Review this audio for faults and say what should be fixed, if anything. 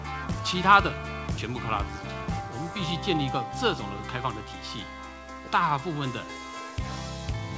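No faults found; nothing needs fixing.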